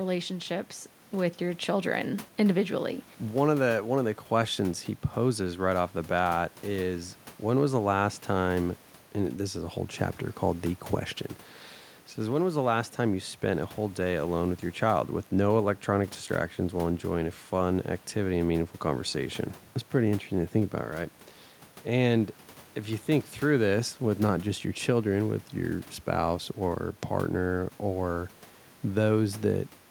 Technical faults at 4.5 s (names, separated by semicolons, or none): none